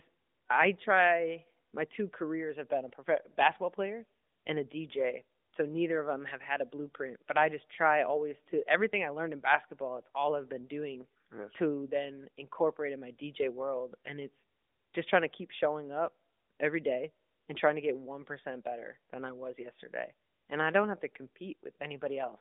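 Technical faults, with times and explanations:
No technical faults are present; the speech passes through the AMR narrowband mobile codec as intended, with a telephone band of about 250 Hz to 3.6 kHz, nothing above 3.7 kHz, and only light coding texture, which fits the 12.2 kbps mode.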